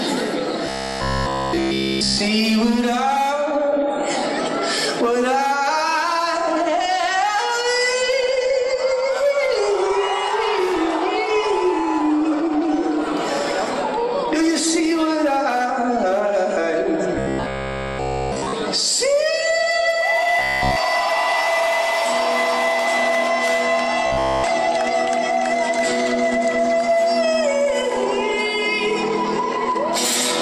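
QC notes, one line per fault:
0.66–2.22 s, 17.15–18.54 s, 20.39–20.77 s and 24.07–24.44 s: robotic sound from repeated short buffers. The sound collapses into a hard, metallic buzz locked at 66.8 Hz, and all of each stretch is made of repeats. The likely cause is late-arriving audio being covered by looping the last chunk of about 15 ms. On a spectrogram these stretches show evenly spaced horizontal harmonics of 66.8 Hz, and the waveform shows an identical short cycle repeating.
2.93 s and 14.39 s: dropped samples. Each is a single sharp click where a handful of samples, a fraction of a millisecond, are missing, so the waveform steps abruptly from one value to a later one. The likely cause is a brief loss in the sample stream, too short to remove any audible sound. On a spectrogram each appears as a thin vertical line spanning the full frequency range, and the waveform shows one discontinuity.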